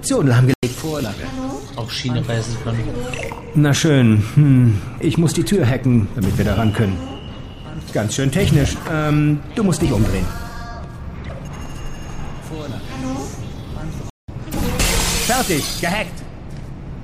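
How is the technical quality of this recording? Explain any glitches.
The recording has two dropouts, both from corrupt frames being muted. The first runs from 0.54 to 0.72 s, a hole of about 0.19 s. The second runs from 14.10 to 14.53 s, about 0.43 s. Corrupted compressed frames were rejected by the decoder and replaced with silence. The gap lengths fit roughly two and five lost frames. Each gap cuts in abruptly, and the sound resumes on schedule with no timing shift.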